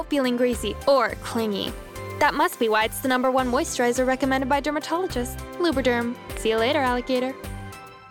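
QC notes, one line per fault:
2.53 s and 6.37 s, loud pop: a sudden voltage step, likely from a plug, switch, static discharge or driver glitch, entered the signal chain, and the downstream circuitry shaped it into a brief pulse of about 20 ms each time. Each is heard as a single sharp pop on top of the sound, which continues underneath. The first peaks roughly 5 dB above the program level and the second roughly 10 dB above it, so the later one is louder.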